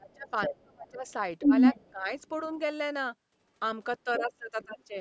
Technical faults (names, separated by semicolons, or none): speech suppressed in double talk; other side's voice leaking through